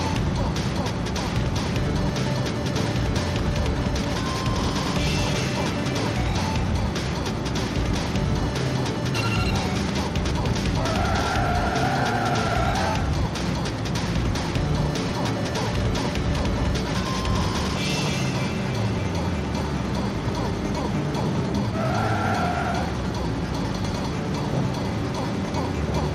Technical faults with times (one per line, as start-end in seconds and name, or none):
0.46-25.19 clock drift buffer slips